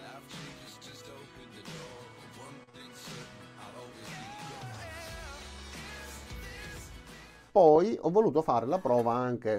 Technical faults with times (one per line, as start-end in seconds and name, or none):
2.63-2.79 short stall from a late packet
2.69-2.75 short concealed packet loss
8.02-8.57 jitter buffer speed-up